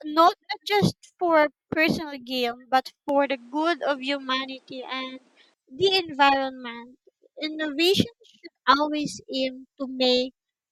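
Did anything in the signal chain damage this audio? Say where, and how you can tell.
Yes, at the capture stage. From 3.09 to 5.54 s the speech loses everything above 10.5 kHz and gains a faint new noise floor, likely an input switched to a poorer device.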